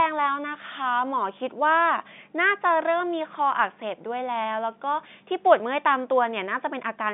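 No faults are audible in the speech, which sits in the normal telephone band of a G.711 A-law line, roughly 150 Hz to 3.6 kHz with nothing above 3.7 kHz.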